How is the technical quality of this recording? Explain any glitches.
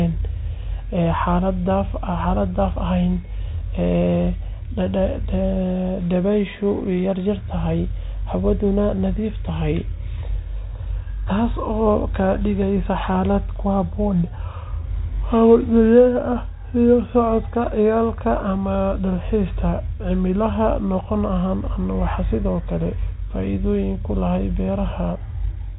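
No glitches to report: the speech comes over a G.711 telephone channel, so the band stops at 3.9 kHz and the coding leaves at most a faint trace under the signal.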